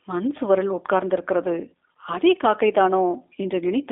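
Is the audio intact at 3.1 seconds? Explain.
No, the whole clip, 3.1 s included, carries G.729 codec damage. The speech is rebuilt from a vocal tract model and a few pulses per frame, which fits an 8 kbit/s line, so it sounds rough and synthetic, squeezed into roughly 250 Hz to 3.6 kHz, with nothing above 3.7 kHz.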